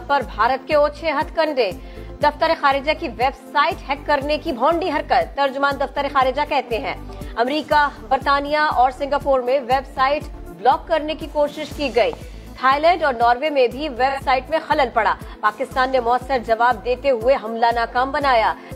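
At 12.13 to 12.15 s a single loud pop sits on top of the audio, peaking a few decibels above the surrounding level while the sound continues underneath. The likely cause is a brief voltage step, from a plug, switch or static discharge, entering the signal path.

From 14.09 to 14.21 s there is AAC frame loss with concealment. About 85 ms of data went missing, which fits two lost frames, and the decoder rebuilt the gap from the preceding spectrum, producing a short smeared, noisy patch.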